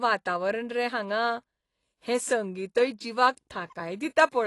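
From start to finish the speech was likely passed through AAC compression at a low bitrate, fitting about 32 kbps. The encoder drops high bands and quantises the rest coarsely. Nothing remains above 11.5 kHz, so the sound is dull and smeared.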